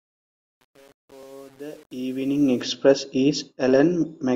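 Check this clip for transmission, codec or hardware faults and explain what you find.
One fault is present: truncation distortion on a fade. From 0.0 to 2.62 s, the fade-in steps coarsely. An undithered gain stage, consistent with 8-bit resolution, makes the sound gritty, worst until 2.3 s, before the level reaches full.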